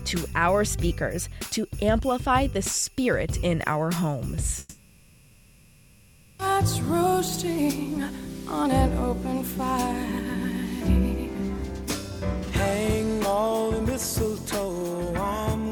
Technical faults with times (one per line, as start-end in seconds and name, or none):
4.59-6.42 long network dropout